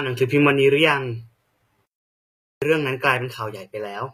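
From the start the treble has that synthetic, gritty sheen, with s sounds edging toward metallic and nothing at all above 14.9 kHz. It's most likely HE-AAC compression at a low bitrate, around 20 kbps, rebuilding the highs from copied lower bands rather than coding them.

Then from 1.86 s to 2.62 s the speech just drops out mid-flow for about 0.76 s and picks back up afterwards. That's a playback stall, likely the player running dry of data or its thread getting blocked until it recovered.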